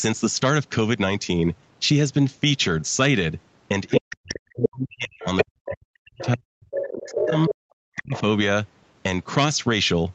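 Other side's voice leaking through at 3.89 to 3.96 s, 4.53 to 4.69 s, 5.2 to 5.73 s, 6.2 to 6.29 s, 6.77 to 7.55 s and 7.97 to 8.21 s. A second voice breaks through in scraps, ranging from faint to as loud as the talker. The likely cause is an echo canceller that left loudspeaker playback in the microphone signal. Speech suppressed in double talk at 3.97 to 7.54 s and 7.85 to 8.14 s. The talker's speech dips by up to around 40 dB while that other voice is present, likely because the canceller turned down both sides at once. Throughout the clip, the call microphone processing leaves nothing above 8 kHz.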